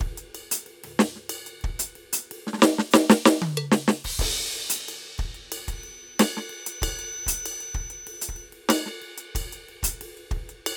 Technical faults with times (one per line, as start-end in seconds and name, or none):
5.68-8.54 feedback whistle